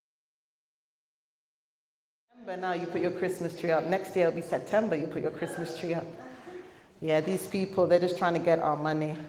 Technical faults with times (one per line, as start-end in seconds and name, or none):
none